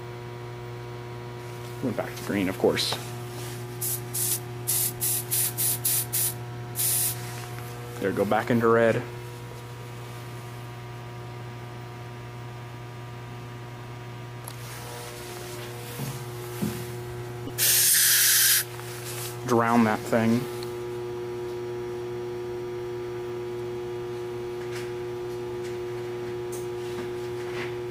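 At 4.97 to 5.00 s and 17.46 to 17.50 s, corrupt frames were decoded. Damaged compressed data played anyway, causing short chirpy bursts. The second is louder.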